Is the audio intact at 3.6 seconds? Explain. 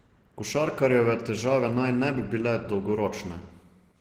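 No. At 3.6 s, as across the whole clip, the speech sounds muffled, hoarse and grainy, which points to likely Opus compression in hybrid mode at around 16 kbps, where sparse bits blur detail. A spectrogram shows smeared, noise-filled upper bands.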